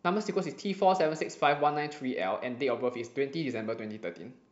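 No technical faults can be heard anywhere in it.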